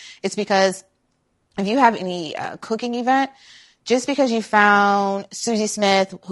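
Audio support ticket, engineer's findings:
Rough, grainy speech throughout; spectrogram shows blurred harmonic lines with noise between them. Likely low-delay AAC compression (AAC-ELD): short frames resolve pitch poorly. Fits about 32 kbps.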